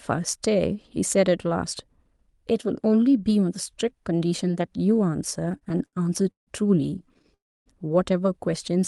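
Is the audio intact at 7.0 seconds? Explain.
No. From 6.99 to 7.30 s there are repeated stalls (stutter): the jitter buffer kept running dry, and short gaps were filled by stretching the preceding sound, causing audible dragging.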